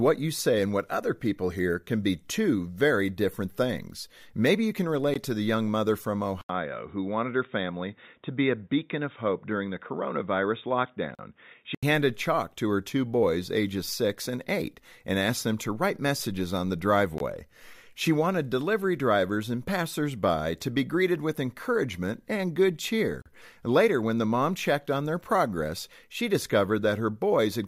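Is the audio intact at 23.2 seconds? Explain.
No. At 23.22 s, just after "with encouragement and good", there is a gap between stream segments lasting about 40 ms, until 23.26 s. The timestamps of two consecutive segments, which fit 6-second segments, don't meet. About 38.5 ms of extra time is inserted, and the player fills it with digital silence. The result is a brief, hard-edged dropout in the speech. Nothing is missing from the audio; it's only delayed by that amount.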